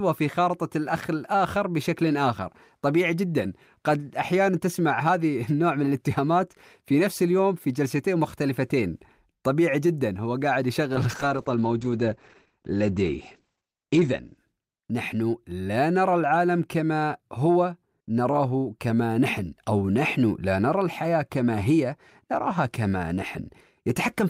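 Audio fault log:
10.95–14.43 s, call bitrate drop: the spectrogram's upper band vanishes, with energy ending flat at 8 kHz instead of 20 kHz, for about 3.2 s at the lowest. The sound turns muffled and rough, which points to the encoder falling from 40 to 11 kbps.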